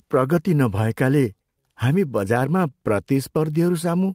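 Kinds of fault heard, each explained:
Clock drift between sender and receiver: present across the whole speech clip. The sender's audio clock runs roughly 4 percent slower than the receiver's, so fewer samples arrive than the receiver plays out and its jitter buffer keeps draining. To avoid running dry, the receiver has to pad the stream by repeating short pieces of audio, so small timing hiccups recur through the clip at uneven intervals rather than as one clean defect.
Repeated timing corrections: from 0.20 s to 4.08 s, the receiver keeps inserting repeated slivers to stay in step with the slower sender. All the edits push the same way, adding roughly 150 ms in total, so the stretch runs at about 96 percent of its proper speed. The insertions are small and unevenly spaced.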